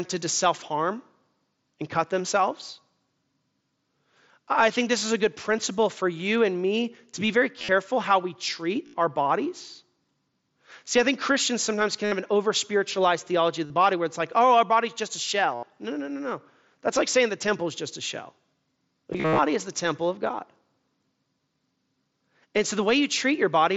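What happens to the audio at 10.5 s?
Nothing goes wrong at 10.5 s: the speech continues intact through that moment, carried over the Bluetooth mSBC headset link as elsewhere.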